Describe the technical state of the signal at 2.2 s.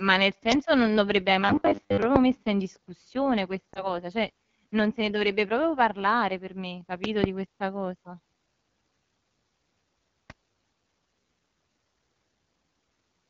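Right around there you've got a loud pop, a single sharp crack from about 2.16 to 2.18 s, so it's just finished by 2.2 s. It sits roughly 20 dB above the speech, which keeps going underneath it. That's a sudden voltage pulse landing on the signal, likely from something like a plug, switch or static discharge, and the stages after it round it off into that brief snap.

Under all of it, the whole clip is running through the AMR wideband (HD Voice) codec at 8.85 kbit/s, one of its two lowest rates. At that rate the pulse-driven vocal tract model can't build the speech up to 6.4 kHz cleanly, so the voice comes across rough and raspy. The top band from 6.4 to 7 kHz is filled with shaped noise in place of real detail.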